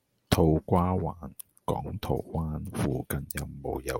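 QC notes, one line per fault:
No faults detected.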